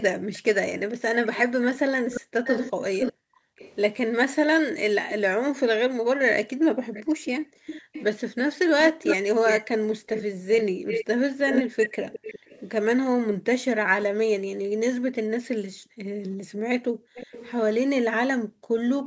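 From 0.0 to 3.76 s a delayed copy of the speech trails it by 509 ms, only about 5 dB quieter. This echo leak is likely the far loudspeaker's sound getting past an echo canceller. Between 0.18 and 3.58 s the background is gated by the echo canceller. The room sound drops by up to about 40 dB for roughly a second in total, then returns. Gating recurs from 4.53 to 8.66 s, for about two seconds. From 6.94 to 12.62 s the echo returns, now 357 ms behind and again about 5 dB down. From 9.65 to 11.78 s the background dips for under a second. From 13.33 to 18.77 s it drops out for about three seconds. A faint echo, about 20 dB down and 357 ms late, surfaces between 17.15 and 17.51 s.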